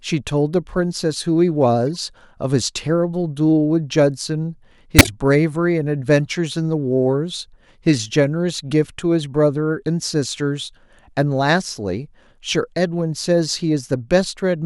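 A speech recording with two instances of corrupt frame decoding: the decoder played compressed frames whose bits had been flipped, so misread gains and codes put energy at the wrong frequencies. At 1.95 s a short error peaks near -25 dBFS. From 4.99 to 5.08 s a stronger error has an error peak near 0 dBFS, consistent with a few damaged frames. On a spectrogram each shows as a brief, out-of-place patch of energy.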